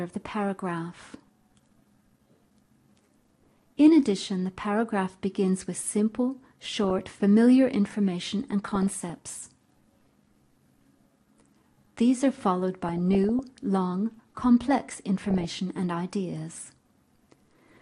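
All the way through, the audio has a dull, gurgling, grainy quality, with upper bands flickering in and out and what's left sounding coarsely quantised. That's the signature of MP2 compression, likely at a low rate, which fits around 80 kbps. Layer II splits the signal into 32 sub-bands and shares bits among them, and when bits run short the top bands get switched off and the rest are quantised roughly.

On top of that there's DAB burbling in four patches: 6.43 to 7.18 s, 8.43 to 9.10 s, 12.86 to 13.39 s and 15.23 to 15.60 s. Each one puts short blips of noise into the sound. That's what you get when reception bit errors, at a rate of a few tenths of a percent, slip past error correction into the MP2 data. Bad samples cause noise blips in single sub-bands, and bad scale factors make bands jump in level for up to a frame.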